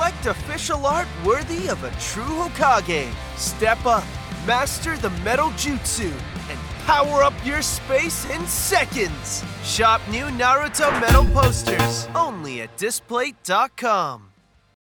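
Lost LE Audio frames break the sound three times: 6.30–6.33 s, 8.25–8.30 s and 11.27–11.29 s. Each time the LC3 decoder bridges the gap by replaying the previous spectrum with scrambled phase. The result is a brief hissy smear rather than the silence or click of a plain dropout, with tonal parts turning grainy. The longest gap, about 45 ms at 8.25 s, fits six 7.5 ms frames.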